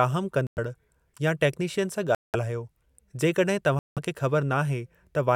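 Bluetooth stalls at 0.47, 2.15 and 3.79 s cut the speech to silence for about 0.1 to 0.2 s before it resumes, likely because interference delayed packets and drained the headphone buffer.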